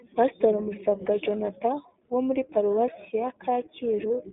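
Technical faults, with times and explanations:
throughout iLBC codec: the speech sounds boxed-in and plainly rough, slightly synthetic, with nothing above 3.8 kHz and little below 200 Hz. Each 20 ms frame's excitation is coded independently at a low rate, which fits iLBC's 15.2 kbit/s mode.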